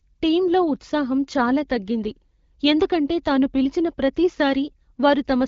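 Nothing stood out on listening to this speech, which comes through the AMR wideband (HD Voice) codec at about 12.65 kbit/s with only the light coding character expected at that rate.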